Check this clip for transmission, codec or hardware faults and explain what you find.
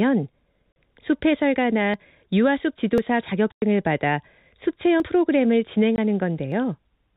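Two faults are present: silence-filled packet loss and dropped buffers. The telephone-band G.711 coding tops out at 4 kHz and adds no audible damage.

Packet loss filled with silence at 0.72–0.76 s, 3.52–3.62 s and 5.96–5.98 s: missing packets were replaced by silence, leaving hard-edged gaps of 40, 100 and 20 ms, consistent with 20 ms packets.

Dropped buffer (overrun) at 1.94, 2.98, 5.0 and 6.52 s: the sound jumps ahead with no gap, roughly 20 ms lost each time, about 40 ms at 5.0 s, likely samples overwritten before the software collected them.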